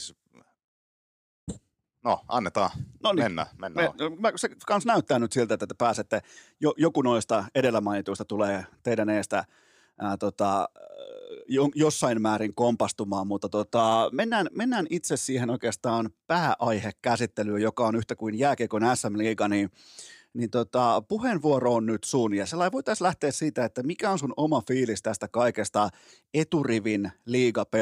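No technical faults can be heard anywhere in the speech recording, and the signal stays steady and intact throughout.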